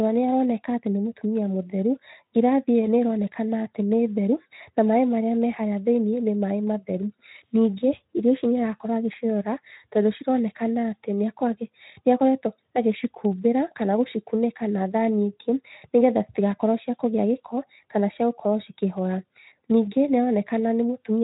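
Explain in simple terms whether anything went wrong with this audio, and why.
Nothing went wrong; I hear no faults in it.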